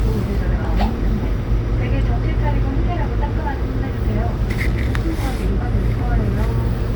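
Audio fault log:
throughout: generation loss. Swirly, hollow, blurred attacks, likely from roughly three lossy passes near 64 kbit/s; the spectrogram shows nothing above 20.2 kHz.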